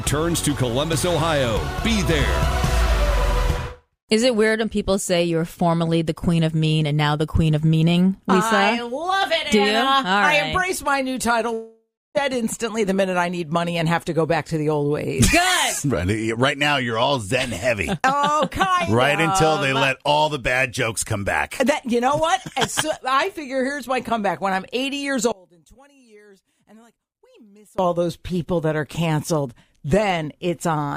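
At 11.53 s the sound suddenly stops progressing and the last moment is stretched into a buzzy, fading tail. By the end the tail has thinned to near silence, with about 0.3 s of nothing before audio returns at 12.17 s. Roughly 0.62 s of material is simply gone. This is likely a long network dropout: the receiver got no audio, masked the gap by extending what it last had, then gave up and resumed later.

From 25.32 s to 27.79 s the sound collapses by about 28 dB. The solid centre and low end almost disappear, leaving only a faint residue until full level snaps back. That is likely the signature of one channel inverted. With one side's polarity flipped, everything common to both channels cancels when they are summed to mono, so only the small difference between them survives.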